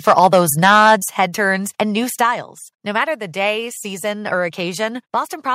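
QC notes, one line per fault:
0.07–0.94 s: microphone overload. The loudest peaks are squared off about 5 dB past the converter's ceiling, a few percent of samples, giving harsh crackle. Input gain was likely set too high.
1.02 s and 2.04 s: microphone volume stepped down. The sound drops suddenly, by about 6 dB and then about 2 dB more, as software likely cut the input gain after the clipping.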